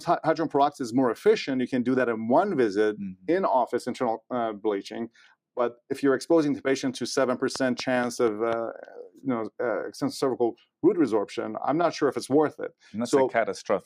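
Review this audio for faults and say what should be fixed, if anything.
Between 9.09 and 9.25 s there's a spot where the sound gets cut by the noise suppressor. The suppressor treated part of the audio as noise and pulled it down harder than everything around it, with the deepest dip at about 12 dB, so the level sags for roughly a sixth of a second before recovering. To prevent it, ease off the suppressor's strength or lower its threshold so genuine sound isn't mistaken for background noise.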